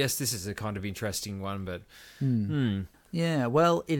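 No technical faults can be heard in this speech, so there is nothing to place in time order.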